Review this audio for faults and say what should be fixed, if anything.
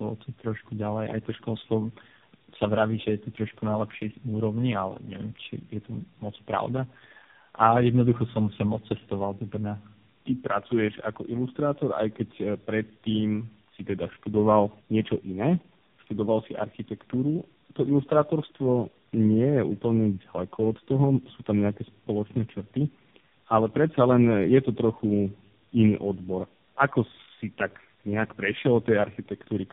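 Tandem speech coding runs throughout the speech. The sound is rough, muffled and warbly, as if three speech coders had been stacked, each re-encoding the previous one's degraded output. Nothing reaches above 3.7 kHz, and the low-rate smearing points to AMR-NB at both ends. To prevent it, keep the call in one codec end to end, using transcoder-free operation across network borders.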